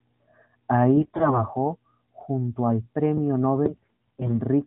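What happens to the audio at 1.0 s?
At 1.0 s the sound falls inside a burst of AMR bit errors lasting from 0.96 to 1.43 s. A heavy share of the less protected bits in each frame, perhaps nearly a third, arrives flipped. Because the checks on the key bits still pass, the decoder plays the frames anyway, with misplaced excitation pulses and wrong fine pitch, gain and spectral values. The result turns hoarse, scratchy and gargly while keeping its rough pitch and loudness. That sets it apart from packet loss, which produces gaps or repeated sound.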